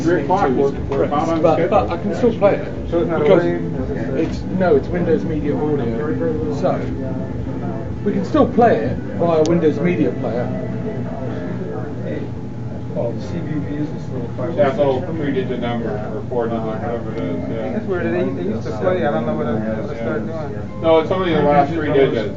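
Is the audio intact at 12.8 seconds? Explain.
Yes, at 12.8 seconds the audio plays through cleanly, with no dropout, click, distortion or other break.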